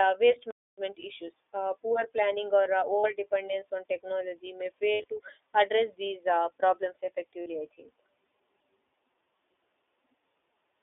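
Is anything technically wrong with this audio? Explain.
Yes, there are three problems.

The iLBC codec is audible throughout as plainly narrowband speech, confined to roughly 300 Hz to 3.6 kHz, with a slightly rough, synthetic edge, which fits iLBC's 15.2 kbps mode with 20 ms frames. Unlike a simple low-pass filter, the coarse texture comes from the coding of each frame's excitation on its own, not just from the missing treble.

A playback stall from 0.51 to 0.78 s cuts the sound off for about 270 ms, most likely because the player's buffer ran dry or its thread was blocked. It is true silence, then the speech resumes. That sets it apart from concealed packet loss, which fills the gap with sound.

Lost iLBC frames occur at 3.00 to 3.06 s, between "poor planning or uh" and "dependence on technology may", and at 7.42 to 7.48 s, after "address these uh problems" and before "I think". Each gap lasts 40 ms, which points to two frames. 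At 4.92 to 5.08 s, after "dependence on technology may" and before "to address these uh", the losses total 120 ms scattered over 160 ms, the longest run about 70 ms. The decoder repeats the last pitch cycle mixed with noise, so each gap sounds like a brief held, buzzy vowel rather than silence. Clean speech returns almost at once.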